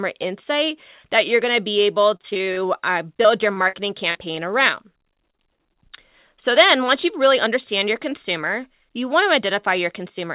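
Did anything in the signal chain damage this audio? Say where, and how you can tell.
Yes. The network stage caused repeated packet loss (robotic sound) from 2.0 to 4.51 s and again from 5.13 to 5.78 s. The concealment repeats the last sound to fill each hole, so the waveform shows copied cycles and short dropouts, and the spectrogram shows smeared, buzzy bands.

The jitter buffer speed-up runs from 8.75 to 10.26 s. Trimming pitch periods removes about 50 ms and plays the sound 3% faster at the same pitch. On the waveform, whole pitch periods are missing at intervals. Throughout, the G.711 call path shows no energy above 4 kHz.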